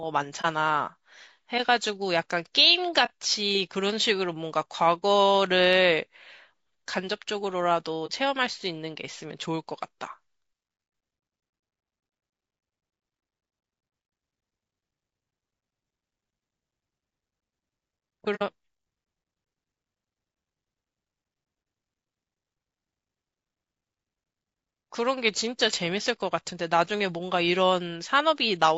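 Throughout the speech, the coder is likely low-delay AAC compression running short frames at a low bitrate, around 32 kbps, leaving the voice plainly rough and grainy, with noise between the harmonics.

AAC frame loss with muting follows at 0.41–0.46 s, 3.05–3.10 s, 5.01 s, 8.06–8.11 s and 18.35–18.42 s. The decoder zeroed missing frames, so the sound fades into brief, soft-edged holes. The last hole is longer, consistent with two consecutive frames gone.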